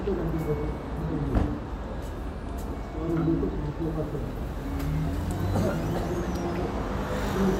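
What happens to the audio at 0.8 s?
Nothing goes wrong at 0.8 s; the sound carries on intact through that moment with no audible fault.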